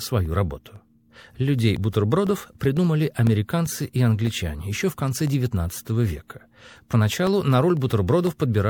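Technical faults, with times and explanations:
0.26 to 8.27 s, periodic USB or driver dropouts: a recurring stall on the USB bus or audio driver every 0.5 s drops about a millisecond of speech, filled with silence, so roughly fifteen evenly spaced ticks puncture the sound wherever signal is present.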